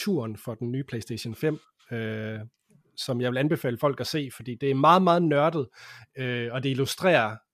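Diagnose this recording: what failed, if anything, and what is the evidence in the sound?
Nothing in the recording points to a failure at any stage of the chain. The speech carries no audible event that would call for a diagnosis.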